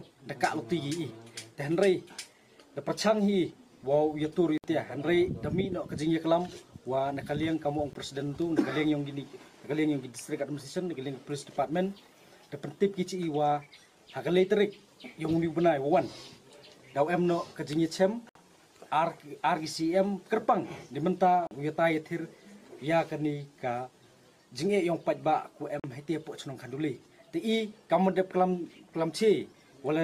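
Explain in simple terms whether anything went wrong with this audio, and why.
The sound cuts out to silence five times, each gap far shorter than a blink: at 4.58 to 4.64 s, 7.93 to 7.96 s, 18.29 to 18.36 s, 21.47 to 21.51 s and 25.80 to 25.84 s, lasting from about 20 to 60 milliseconds. Each time it comes back a little further along, as if it had kept playing underneath. This is a Bluetooth dropout, likely caused by small chunks of audio failing to reach the headphones in time and being thrown away.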